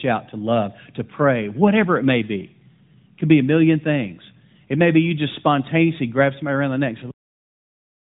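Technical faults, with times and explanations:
7.11 s, cut-off end: right after "around the neck and" the speech stops mid-sound into flat digital silence with no decay, since the final buffers never got written.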